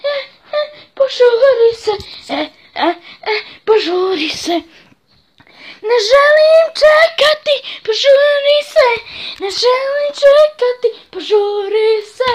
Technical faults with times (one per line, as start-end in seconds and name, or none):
0.00-4.00 adaptive stream starting at a low bitrate